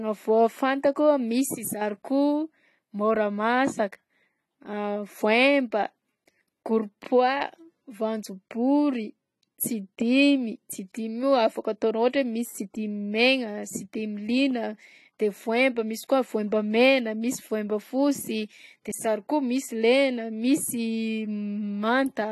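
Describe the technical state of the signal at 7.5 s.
At 7.5 s the speech shows AAC compression damage, present across the whole clip. Nothing remains above 12 kHz, and the sparse, smeared spectrum with a fizzy edge on sibilants likely comes from an AAC-LC encode at about 32 kbps.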